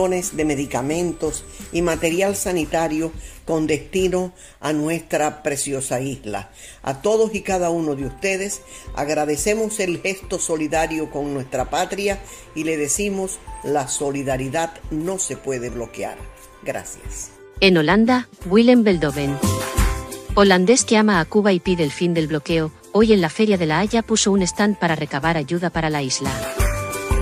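From the start to about 2.07 s there's USB whine, a steady 8 kHz tone sitting roughly 25 dB under the signal. That's the bus's 125 microsecond microframe current leaking in through power or ground.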